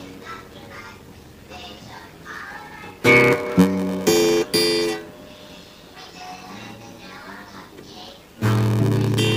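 Throughout, a block size mismatch (padded) zero-fills the tail of each block, which fits a 512-sample read size. This causes a 93.8 Hz buzz and slows the audio to 0.861x at about normal pitch. The waveform shows regular flat gaps, and the spectrogram shows evenly spaced vertical stripes.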